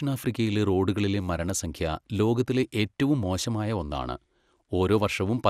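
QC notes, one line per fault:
Throughout, MP2 compression: likely a starved MPEG Layer II encode, consistent with about 80 kbps, switching off upper sub-bands, leaving the speech dull, gurgling and granular.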